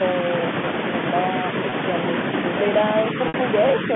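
At 1.70 s, about 20 ms of audio drops out. The receiver repeats the last pitch period, so the sound briefly holds with a buzzy tone. At 3.28 to 3.34 s, a 60 ms gap repeats and fades toward silence before the speech cross-fades back. This is packet loss with pitch repetition.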